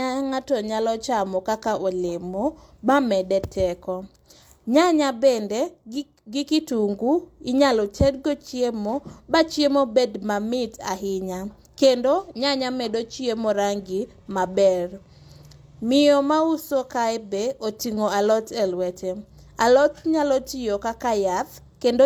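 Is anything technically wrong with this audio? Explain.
No, nothing technically wrong can be heard here.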